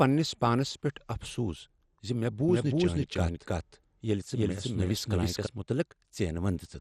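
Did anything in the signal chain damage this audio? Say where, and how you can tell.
Yes. At the codec stage, likely MP2 compression at a rate consistent with 64 kbps, the speech loses everything above 14.2 kHz and turns dull, gurgling and granular throughout.

From 2.49 to 5.47 s there is a doubled audio track, likely from a second, slower capture path. A full-band copy at about equal level trails roughly 300 ms behind, starting and stopping abruptly.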